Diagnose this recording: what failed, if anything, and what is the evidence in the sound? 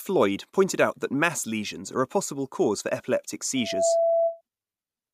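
Loudspeaker feedback squeal in the analogue mic-to-speaker loop: after "possible cause for epileptic", a 668 Hz tone swells over about 0.3 s, from 3.56 to 4.41 s, peaking about 5 dB above speech.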